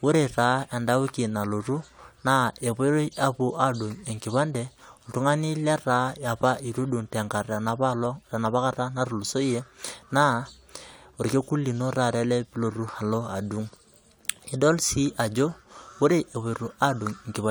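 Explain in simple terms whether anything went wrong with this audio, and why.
Nothing stood out as wrong when listening to this recording of speech.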